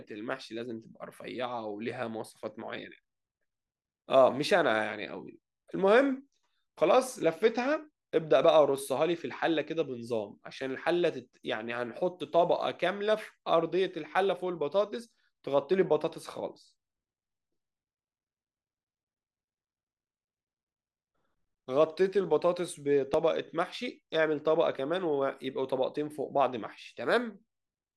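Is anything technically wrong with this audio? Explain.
Yes. At 8.44 s and 23.14 s the speech jumps ahead by about 20 ms with no gap, likely a dropped buffer (overrun), where unread samples were overwritten and the edges were spliced together.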